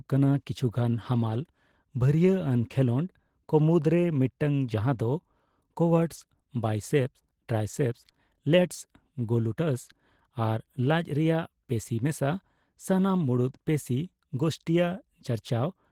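Opus voice compression affects the whole speech clip. Hybrid coding keeps sound up to 20.2 kHz, but it sounds plainly hoarse, fitting about 16 kbps.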